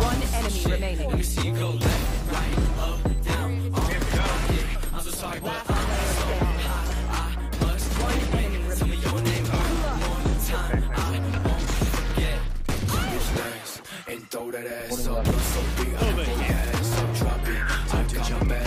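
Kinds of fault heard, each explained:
No audible faults detected.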